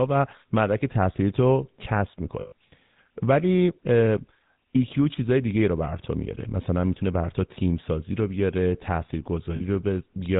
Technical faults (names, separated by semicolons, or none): GSM full-rate codec; lost GSM frames